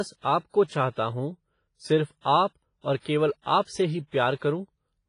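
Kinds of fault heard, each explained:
WMA compression: A low-rate transform codec, likely WMA, has coarsely quantised the audio, pointing to a bitrate near 24 kbps. The speech carries heavy damage: ringing, washy hiss that swells with the signal, weak detail dropped, and nothing above about 10.4 kHz.
pre-echo: The encoder spread quantisation noise across a whole transform block containing a sharp attack, so noise meant for the loud onset leaks backwards. From 0.64 to 0.70 s, about 56 ms of hiss precedes "हूँ सिर्फ आप और", softening that onset.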